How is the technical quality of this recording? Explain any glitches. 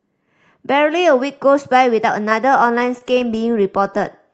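The recording has one audible glitch, a run of stutter in the latter part of the clip, heard over the band-limited sound of a call codec whose top end stops around 8 kHz, which fits Opus at about 24 kbps.

Repeated stalls (stutter), 2.53 to 3.61 s: packets reached the receiver late, so its jitter buffer ran dry nine times in that stretch. Each time, the receiver extended the last bit of sound until fresh audio arrived. The fills are short, the longest about 20 ms and roughly 95 ms in total, and nothing is actually lost. The speech briefly hitches and drags, with a stammering rhythm.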